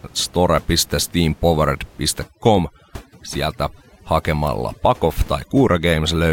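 Overdone noise removal sets in at 2.24 s and runs to the end of the clip. A noise reduction stage pushed too hard is cutting individual frequency bands far down, or off entirely, whenever they sit close to its noise estimate. The room noise, about 24 dB below the speech before this point, drops and breaks up into twinkling specks, and the quieter parts of the speech are stripped away.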